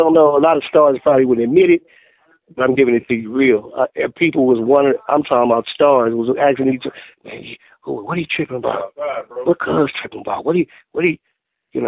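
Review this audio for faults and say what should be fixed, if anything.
Nothing needs fixing: the signal holds steady and continuous throughout, with no audible technical faults.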